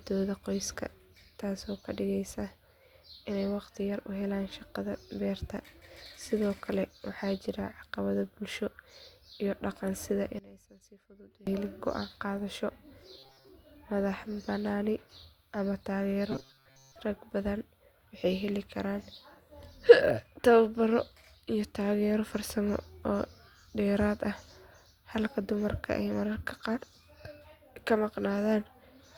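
Speech, and it has two kinds of trouble. From 10.39 to 11.47 s, right after "iyo dhaqan sida", the voice nearly collapses, dropping by about 22 dB into a faint remnant until it recovers before "helin go’aan qaadasho". That points to one channel inverted: likely one side's polarity flipped, so the centred voice cancels against itself in a mono sum and only the small difference between channels survives. Then there's robotic sound from repeated short buffers, twice. The first comes just after "helin go’aan qaadasho", from 13.19 to 13.48 s. The second runs from 16.32 to 16.96 s, ending before "rag badan waxay heli". Both times the voice turns into a stiff, metallic buzz locked at 134 Hz while still loosely tracking the syllables. That's likely the playback starving for data and looping a slice of roughly 7.5 ms to cover the gap, with most of the real audio skipped and replaced by repeats. 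The loop's period is what stamps that fixed pitch on the sound.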